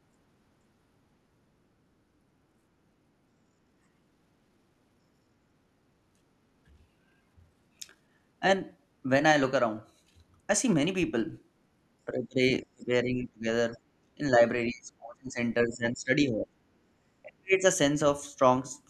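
From 12.06 s on, the speech keeps getting pushed down in bursts: 12.06–12.41, 12.73–13.46, 13.75–13.79, 14.16–14.20, 14.66–15.38, 15.65–16.53 and 17.23–17.66 s. The two tiny ones dip it about 10 to 15 dB, while the longer ones drop it about 20 to 35 dB. That's speech suppressed in double talk, most likely the echo canceller mistaking near-end speech for loudspeaker echo while the far side talked, and clamping down on both.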